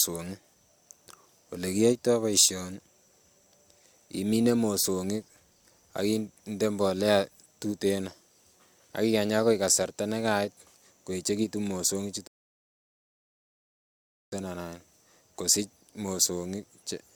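Playback of this speech clip halts abruptly at 12.27 s, just after "koeechekitun mosong'ik", and sits in dead silence until 14.32 s, when the audio picks up again from the exact point where it stopped, with nothing skipped or repeated. This is a rebuffering stall: the player used up the audio it had downloaded and had to wait for more data, so the pause adds about 2.05 s to the running time while the content stays intact.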